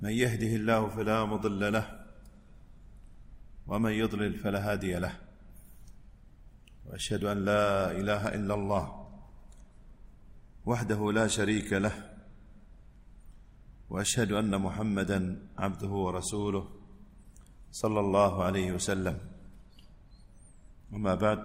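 From about 7.31 to 10.13 s there's sample clock jitter: the converter's timing wobbles by something like a couple of microseconds, so fast-moving parts of the waveform get misplaced. You hear a gritty hiss riding on the louder, brighter moments, sitting roughly 40 dB under the signal.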